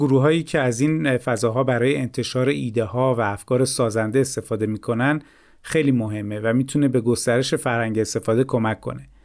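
Speech, with no technical fault audible at any point in the signal.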